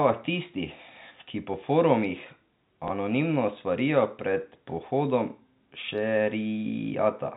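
A speech recording that has passed through G.711 telephone coding, so nothing above 4 kHz comes through, has a single instance of packet loss with the last packet repeated at 2.88 s: one packet went missing and the receiver replayed the previous one. That 20 ms of repeated audio gives a small blip.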